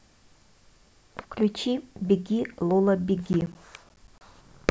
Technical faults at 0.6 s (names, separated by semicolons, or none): none